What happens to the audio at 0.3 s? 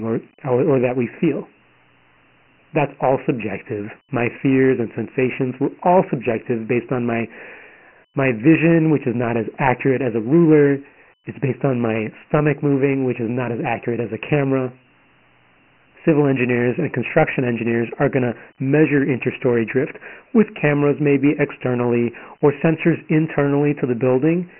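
At 0.3 s the speech sounds thin and boxed-in, with gritty hiss trailing it and nothing above 2.9 kHz. This is Dialogic VOX ADPCM damage across the whole clip: coarse 4-bit coding, consistent with 6,000 samples a second, roughens everything.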